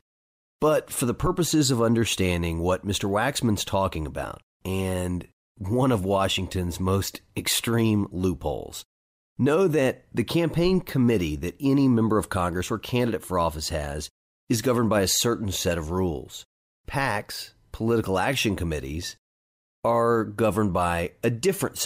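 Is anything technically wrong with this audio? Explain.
No, nothing technically wrong can be heard here.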